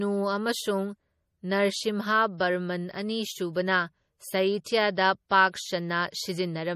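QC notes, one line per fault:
Throughout: MP3 compression, likely. The speech has a plainly audible watery, swirling quality. Nothing is present above 15.1 kHz, so the treble stops at a hard ceiling. The encoder splits the sound into frequency lines and spends bits where it expects them to be heard. Weak lines are zeroed and flicker on and off between frames. That flicker causes the swirl. The damage fits a low bitrate, around 40 kbps.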